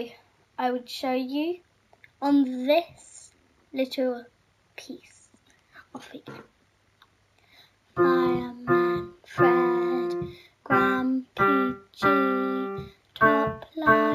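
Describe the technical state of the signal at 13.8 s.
At 13.8 s, as throughout the clip, there is imaging from linear upsampling, consistent with a rate raised from 16 kHz to 48 kHz by straight-line interpolation. The top of the band is dulled and a faint mirrored copy, roughly 35 dB down, fills 8 to 16 kHz, heard as a light metallic shimmer. On a spectrogram it appears as a weak reflected image above 8 kHz.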